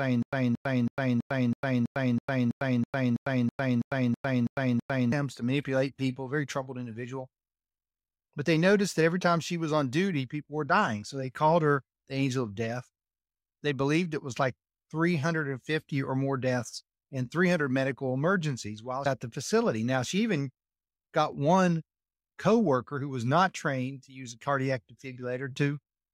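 Stutter with silent gaps runs from 0.0 to 5.12 s, already under way when the speech begins: a 225 ms fragment repeats fifteen times, each followed by about 101 ms of dead silence, likely a stalled stream replaying its last buffer, until "to manipulate people very".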